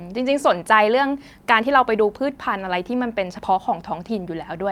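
No technical faults can be heard anywhere in the speech. Nothing in the audio calls for a fix.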